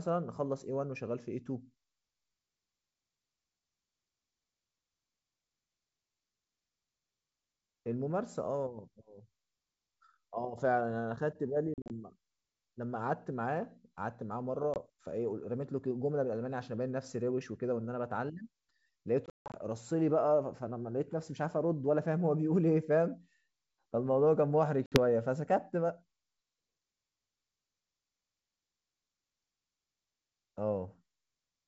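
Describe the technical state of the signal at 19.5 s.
Hard-edged silent gaps run from 19.26 to 19.56 s, the longest 160 ms: packet loss on an ADPCM call, around ten packets dropped, desynchronising the decoder's predictor.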